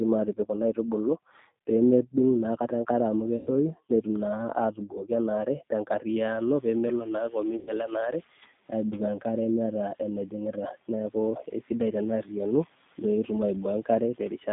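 Throughout, the speech passes through a G.729 codec at 8 kbit/s, which rebuilds each 10 ms frame from a vocal-tract filter, a pitch predictor and a handful of pulses rather than the actual waveform. The line band runs only from about 150 Hz to 3.7 kHz, so the speech sounds thin and boxy, and the coding damage is plainly audible as a rough, slightly synthetic edge on every syllable.

At 3.37 to 3.50 s, about 100 ms of packets go missing, which fits five lost 20 ms packets. With nothing to decode, the G.729 decoder conceals the VoIP packet loss by extending its last pitch and filter settings while lowering the gain. The speech there smears into a buzzy tone or coloured noise that fades, and because each frame depends on the one before it, the voice stays weak or distorted for a moment after real packets resume.

Around 6 s the room noise jumps sharply, by about 16 dB, and from 6.12 to 8.3 s the noise suppressor is catching up. 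Its noise estimate lags behind the new level, so the noise at first comes through with little reduction and then gradually sinks by about 8 dB over roughly 2.2 s as the estimate adapts.

Within that window, at 7.57 to 7.72 s, a second burst of packet loss removes another 100 ms, again consistent with five packets. The concealment again produces a fading buzzy tone or coloured noise, now laid over the still-settling background noise.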